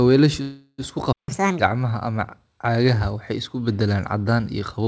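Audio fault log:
0.42–0.80 s, call audio freeze: the sound stretches out into a fading buzz for about 0.36 s, with a brief drop to silence near the end, then carries on right where it stopped. Packets were likely held up, so the jitter buffer ran dry and nothing is lost.
1.13–1.28 s, playback stall: the audio just cuts out mid-flow for about 0.15 s and then resumes. The likely cause is the player running out of data or its thread getting blocked, so the output sat silent until it recovered.
1.28–1.59 s, catch-up at higher speed: right after the stall everything plays at 1.5 times normal speed, with pitch jumping roughly seven semitones, then settling back. The player is resampling its backlog faster to win back the time the stall cost.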